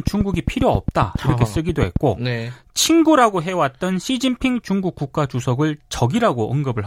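From 0.07 to 1.97 s, a train of clicks ticks over the speech, about fifteen evenly spaced pulses at 7.41 per second. They stand about 15 dB above the signal. Likely cause: electrical interference or a faulty connection or power supply.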